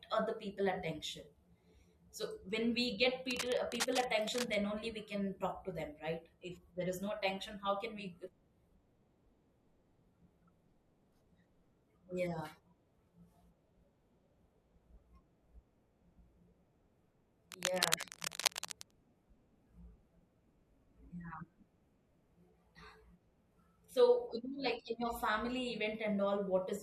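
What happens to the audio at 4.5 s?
A worn cable, connector or control was likely being moved, so its contact resistance kept jumping and fed irregular bursts of noise into the signal. That is cable scratch noise, running from 3.30 s, just after "we get", and finishing at 4.54 s, just before "only we can talk". At 4.5 s you hear its final moments: a ragged scratching, rustling layer sitting only slightly below the speech, then clearing.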